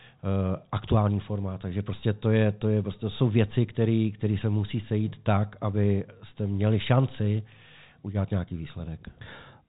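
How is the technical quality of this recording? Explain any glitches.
Nothing stood out on listening; the speech arrives over G.711 telephone coding, which holds it within the narrow phone band with nothing above about 3.8 kHz.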